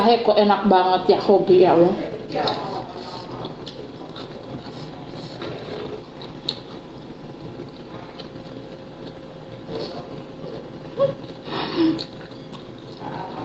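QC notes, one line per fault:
Throughout, gain pumping: input gain likely set far too high, so a fast limiter clamps down on every loud sound, dragging the background up in gaps and ducking it under peaks by around 10 dB, leaving the audio squashed, with the band ending near 8 kHz.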